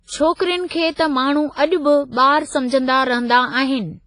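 The whole speech clip sounds like it was squeezed through a transform codec, likely WMA compression at a low bitrate, something like 24 kbps. Everything above 10.4 kHz is gone, and the damage is heavy: a ringing, washy quality with hiss that swells and fades with the voice.

At 0.34 to 0.39 s and again at 0.66 to 0.71 s you get pre-echo. The codec's noise, sized for a sharp onset, leaks into the quiet just before it, so a short hiss of about 57 ms and then 45 ms runs ahead and the attacks sound smeared.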